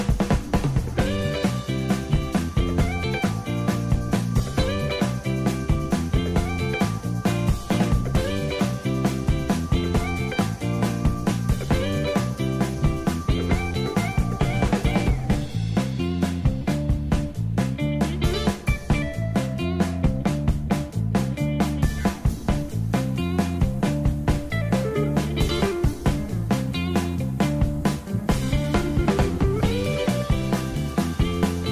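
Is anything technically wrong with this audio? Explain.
No, the signal holds steady throughout with nothing in it that points to a technical problem in how it was captured, processed or delivered.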